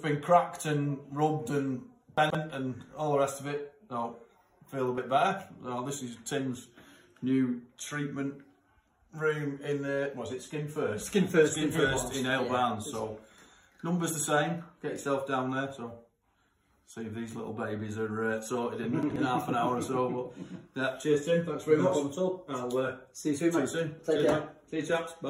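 Two brief chunks-out-of-order events jumble the sound, at 2.18 to 2.35 s and 19.03 to 19.16 s. In each, a block of about 43 ms plays three and then two blocks late, reordering the audio with three hard joins each.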